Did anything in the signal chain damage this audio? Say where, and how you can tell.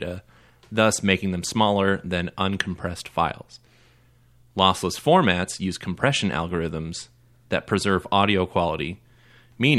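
No, nothing in the chain audibly damaged this speech recording, and no stage shows any evidence of a fault.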